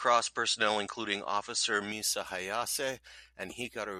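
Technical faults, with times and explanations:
0.00–1.92 s, input switched to a poorer device: for this opening stretch the speech is band-limited, with nothing above 9 kHz, so it sounds duller and boxier. It carries a faint noise floor of its own, far below the speech, and at 1.92 s the sound opens up at once with no gap, shifting in level by roughly 5 dB. The likely cause is the recording starting on a narrower-band input, such as another microphone or a headset's call profile, before changing to the main device.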